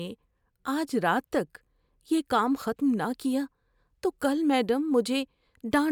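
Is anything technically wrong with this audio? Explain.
No, nothing stood out as technically wrong on listening to this speech recording.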